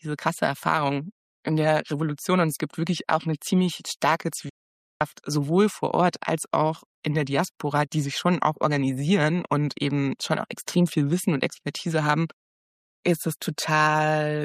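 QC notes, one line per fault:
4.49–5.01 s, digital broadcast dropout: the sound is cut off within about 3 ms, leaving roughly half a second of silence (512 ms) before it resumes partway through the material. The receiver stopped getting decodable data and muted its output until valid frames arrived again. Nothing sent during the gap can be recovered. The hole's length fits a short run of lost frames, around sixteen frames of about 32 ms each.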